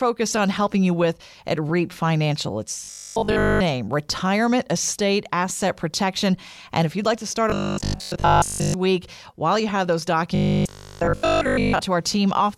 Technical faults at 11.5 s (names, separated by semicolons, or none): robotic sound from repeated short buffers